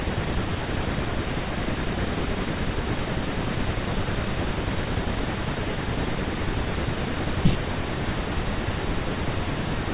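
No technical faults can be heard anywhere in this speech recording. Nothing in it stands out as a problem from the opening to the final moment.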